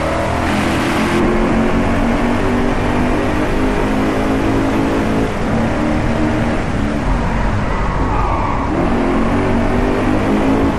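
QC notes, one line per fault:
No faults were found in this clip. Nothing in the audio calls for a QC entry.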